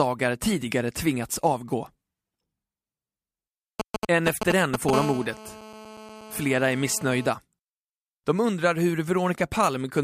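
From 3.80 to 4.91 s you get GSM signalling bursts: a galloping dit-dit-dit of short buzzes, roughly as loud as the speech itself. That's a 2G handset nearby sending brief groups of radio bursts while it talks to the network. The audio circuitry rectifies the RF, so each group turns into a little packet of 217 Hz buzz, and the clusters give it that stuttering, horse-trotting rhythm.

Right after, at 4.93 s, the pattern gives way to the full GSM phone buzz, which runs to 7.26 s. This is a 2G handset in a call, transmitting continuously at 217 bursts per second. Rectified, that becomes a hard, raspy, harmonic-heavy buzz at 217 Hz, nearly steady and about 12 dB below the speech. It has nothing to do with the speech underneath, so it just sits there grinding away until it stops.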